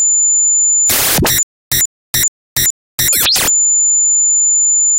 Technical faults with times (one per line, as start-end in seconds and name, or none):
1.43-3.13 stutter with silent gaps